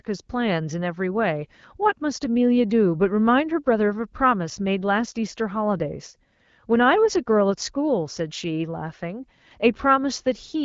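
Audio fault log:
No fault to log.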